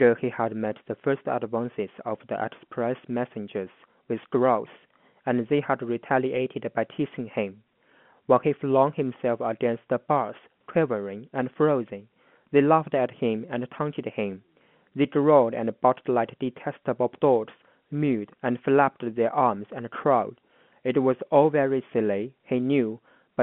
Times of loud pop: none

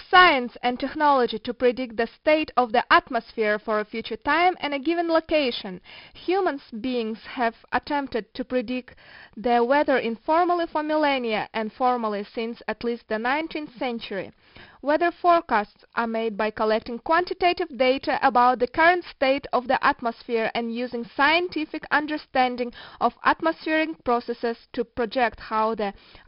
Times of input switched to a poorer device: none

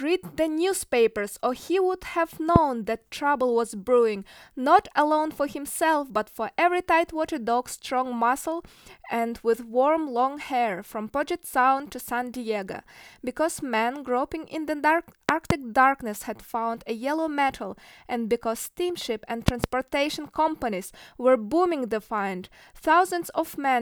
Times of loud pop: 2.56-2.58, 15.29-15.53, 19.48-19.66

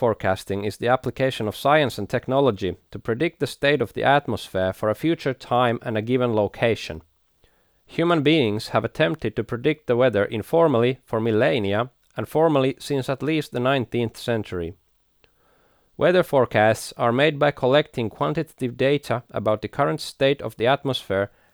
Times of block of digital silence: 6.95

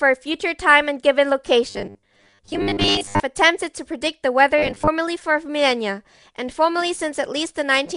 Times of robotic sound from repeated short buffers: 1.70-3.20, 4.58-4.88

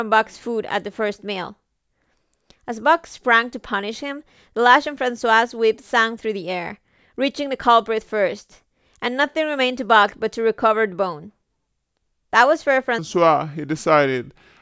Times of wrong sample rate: 12.98-14.62

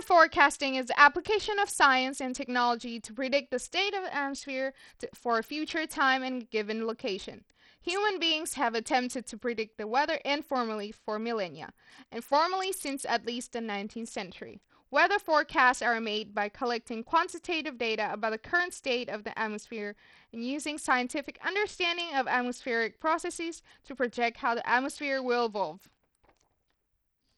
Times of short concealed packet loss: none

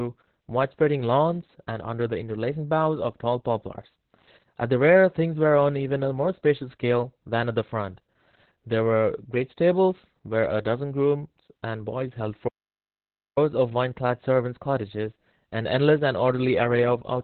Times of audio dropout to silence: 12.48-13.37

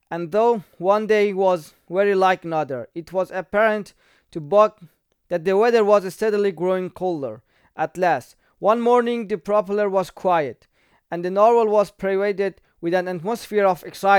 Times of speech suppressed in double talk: none

